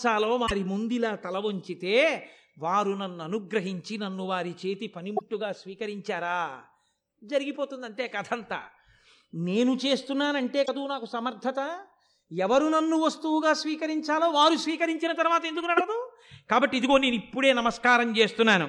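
Four short glitches come from damaged data in a compressed stream: at 0.43 to 0.51 s, 5.14 to 5.22 s, 10.62 to 10.69 s and 15.74 to 15.81 s, each lasting roughly 70 to 80 ms. Each time, some bytes in the encoded speech went bad, so the decoder couldn't make sense of those frames and had to hunt for the next clean frame header. You hear that as a quick glitch cutting into the speech.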